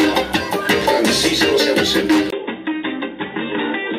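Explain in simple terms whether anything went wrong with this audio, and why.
Yes, something changes at 2.30 s. After a tiny gap of about 20 ms, the sound goes duller and a bit quieter, with nothing above about 3.8 kHz and a faint new hiss, until the end. That points to a likely input switched to a poorer device, such as a different mic.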